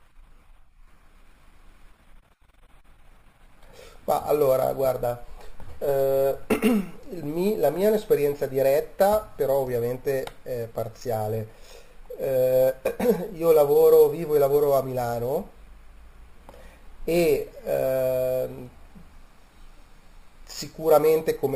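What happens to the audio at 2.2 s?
At 2.2 s, as throughout, imaging from sample-and-hold upsampling (12 kHz to 44.1 kHz) mirrors the speech into 6–12 kHz at about −22 dB, giving metallic fizz. A spectrogram shows inverted harmonics; the waveform shows staircase steps.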